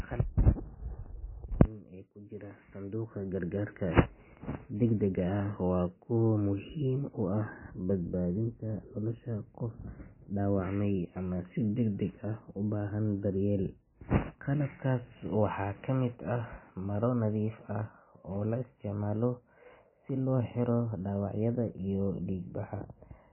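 MP3 compression damage runs throughout the speech and is heavy. Nothing survives above 3 kHz, so the sound is dull and watery, with swirling and smeared attacks. This likely comes from a bit-starved encoder, consistent with roughly 17 kbps, cutting treble and dropping weak frequency lines frame to frame.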